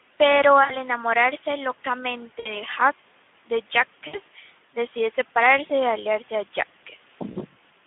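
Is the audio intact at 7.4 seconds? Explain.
No. VoIP packet loss concealed by the speech codec drops about 40 ms from 7.31 to 7.37 s. The decoder stretches its last pitch and filter into a buzzy tone or coloured noise that fades, and because each frame builds on the previous one, the audio at 7.4 s is still weak or distorted while the decoder recovers. The Speex codec also runs throughout, band-limited to 150 Hz to 3.5 kHz. Its plainly audible hoarse, noisy CELP coding fits a low setting of around 11 kbps, where too few bits are left to code the excitation cleanly.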